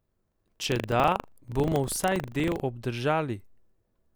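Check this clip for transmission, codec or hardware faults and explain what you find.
One fault is audible: buffer tearing, from the start to 2.64 s. The writing program and the hardware reader have slipped, so a small slice of each 40 ms buffer replays audio from about 70 ms earlier, with hard joins on both sides. The result is a steady 25 Hz robotic rattle that rides on the speech. Dropouts, by contrast, would leave silent gaps rather than a continuous buzz.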